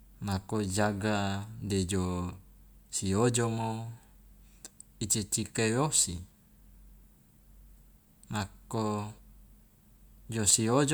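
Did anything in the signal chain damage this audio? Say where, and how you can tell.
No, nothing in the chain has left an audible mark on this speech recording, and the signal holds steady with no dropouts, distortion or timing disturbances at any point.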